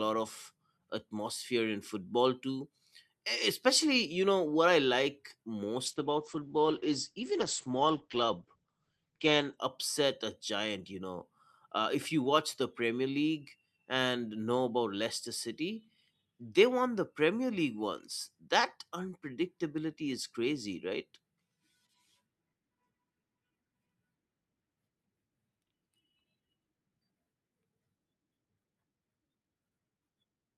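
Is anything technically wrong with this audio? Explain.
Yes. From 5.87 to 9.63 s there is a call bitrate drop. The speech turns coarse and muffled, with highs gone above about 8 kHz. This suggests the encoder was forced from roughly 64 kbps down to about 11 kbps after the bandwidth estimate fell.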